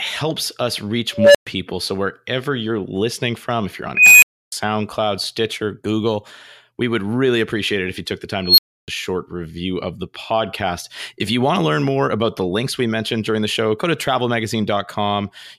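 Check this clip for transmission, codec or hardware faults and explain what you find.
Three times in this speech clip a tone swells to a harsh squeal, clips, then drops to silence: at 1.14 to 1.47 s, a low tone of around 500 Hz builds over 205 ms, then goes quiet for 120 ms; at 3.95 to 4.52 s, a tone of around 3 kHz builds over 272 ms, then 299 ms of silence; at 8.44 to 8.88 s, a tone of around 4 kHz builds over 138 ms, then 299 ms of silence. This is an unstable filter: a recursive filter with bad coefficients feeds its output back until the values overflow, and it stays muted until it resets.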